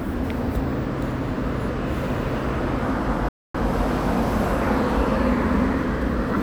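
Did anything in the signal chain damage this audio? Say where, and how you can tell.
Yes, a playback stall: the sound cuts to silence at 3.29 s for about 260 ms, resuming at 3.55 s, likely the player's buffer running dry.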